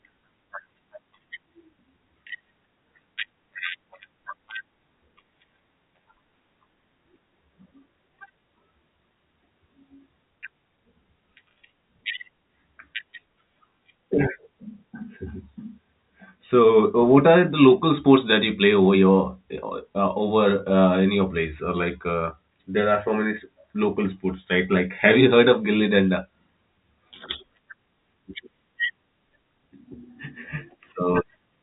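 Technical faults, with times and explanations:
Nothing faulty can be heard anywhere in this recording.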